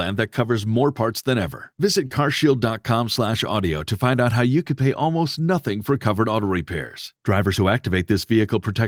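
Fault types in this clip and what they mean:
Lost packet rebuilt from error correction: Around 0.73 to 0.83 s, between "that covers" and "parts than ever", and again at 4.15 s just before "out how you could", data went missing. The following packets carried low-bitrate backup copies, and the Opus decoder played those instead. There is no dropout. About 60 ms, then about 20 ms, turn coarser and noisier, which fits three lost packets in the first spot and a single one in the second.
Short concealed packet loss: From 2.07 to 2.11 s, a 20 ms piece of the stream arrived too late to decode, and no backup copy covered it. The receiver bridged the hole by extending the preceding sound, carrying its pitch forward if voiced or filling with shaped noise if not, then blending back into the real signal. It is heard as a brief smear or wobble in place of that fragment.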